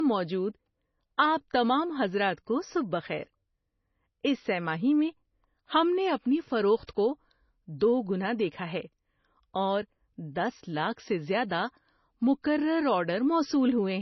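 Low-bitrate audio saved at a high bitrate, throughout the speech: nothing above 5.9 kHz, leaving it muffled with smeared detail, likely from 24 kbit/s MP3 later re-encoded at 320 kbit/s.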